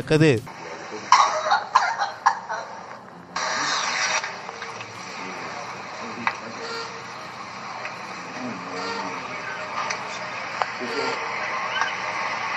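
No technical faults can be heard anywhere in the clip.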